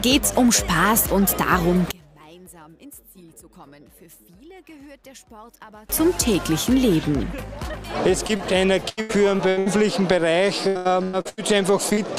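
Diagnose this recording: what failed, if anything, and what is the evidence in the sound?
One channel inverted, 1.91 to 5.89 s: the sound drops about 26 dB, likely a polarity-reversed channel in analogue wiring cancelling shared content when summed to mono.

Short concealed packet loss, network stage, at 8.27, 8.37, 11.89 and 11.93 s: brief smears of 20 to 40 ms where the receiver extended the preceding sound over missing packets.

Repeated packet loss (robotic sound), network stage, 8.89 to 9.68 s and 10.68 to 11.39 s: five gaps in each, up to 80 and 102 ms, concealing 41% and 53% of each stretch, giving choppy audio with pieces missing.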